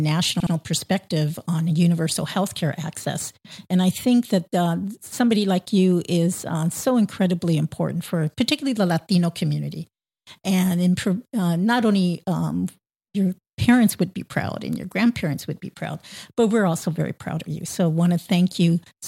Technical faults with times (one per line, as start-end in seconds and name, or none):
0.40-0.53 repeated frames